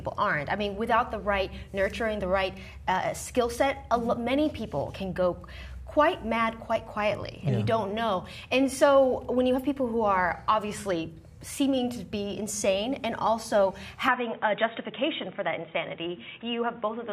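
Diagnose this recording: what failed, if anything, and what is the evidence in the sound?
From 14.08 s to the end, the sound abruptly loses everything above 3.8 kHz and picks up a new background noise sitting roughly 35 dB below the signal, with no gap and no real jump in level. That points to the input likely having been switched to a poorer device at the driver or device-routing stage. A codec stepping down its bandwidth would narrow the band but keep the same noise floor and tone. Here the new noise and the changed colouring point to different hardware.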